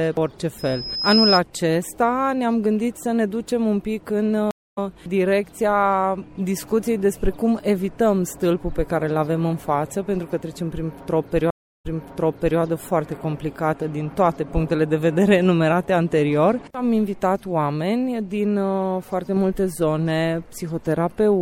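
From 0.58 to 1.40 s a loudspeaker feedback squeal at 5.1 kHz swells over roughly 0.7 s to about 5 dB above the sound, a single bright horizontal spectrogram line.

Two stream reconnects follow, each a flat waveform gap: 256 ms at 4.51 s, resuming roughly 0.2 s later, and 339 ms at 11.51 s, replaying 758 ms of earlier audio.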